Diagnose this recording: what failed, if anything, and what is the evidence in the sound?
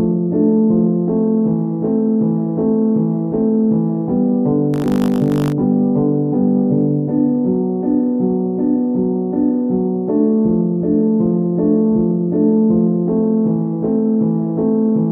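Buffer tearing at the driver/buffer stage, from 4.72 to 5.52 s: a robotic 50 Hz rattle rides on the sounds, meaning a 20 ms period. The writing program and the reading hardware had slipped so their positions crossed inside each period, leaving a small slice, a few percent, of audio from one lap earlier, about 40 ms old, with hard joins either side. Unlike 50 Hz mains hum, the buzz is rough, not tonal, and follows the signal.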